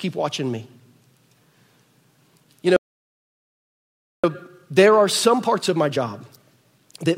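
At 2.76 s the speech cuts off abruptly in mid-flow and total silence follows for about 1.47 s, until 4.24 s. This is a playback stall, likely caused by the player running short of buffered data or its output thread being held up. On a waveform the trace drops straight to a flat line with no decay tail, and a spectrogram shows a clean blank column across every frequency band, bounded by hard vertical edges on both sides.

From 4.24 s to the end, the speech resumes but runs about 1.1 times faster than normal while keeping its natural pitch. This is time-compressed catch-up: to work off the backlog left by the stall, the player trims out short slices of audio and cross-fades across the joins. The result sounds slightly rushed. On a spectrogram the harmonics stay at their usual heights but syllables and pauses are shortened, and small discontinuities show where slices were removed.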